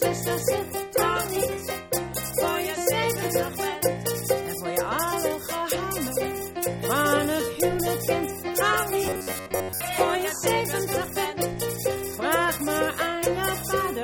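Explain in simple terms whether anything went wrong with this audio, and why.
From 9.07 to 9.81 s the sound becomes a metallic buzz near 94 Hz: robotic sound from repeated short buffers, likely an 11 ms chunk looping.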